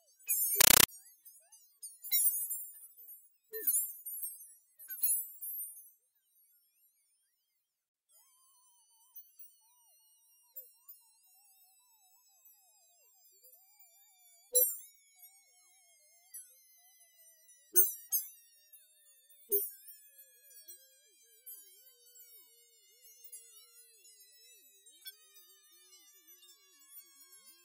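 From 0.61 to 0.88 s, compressed stream played as audio: undecoded AC-3 data, heard as loud chattering static in 9.33 ms bursts, 31.25 times a second.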